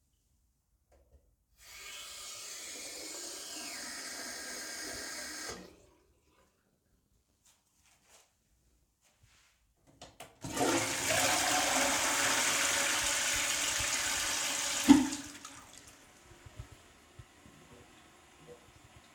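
Everyday sounds, with no technical faults heard anywhere.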